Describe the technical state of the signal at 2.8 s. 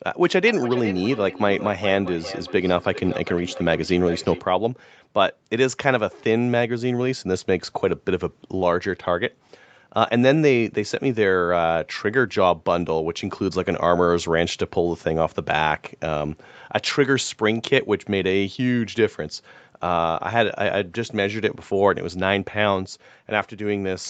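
At 2.8 s the signal carries feedback echo between two devices, running from 0.4 to 4.45 s. A second device in the room replays the call audio into the microphone, beyond the local echo canceller's reach. The speech returns roughly every 0.4 s, thinner and ringing, peaking about 13 dB below the direct speech.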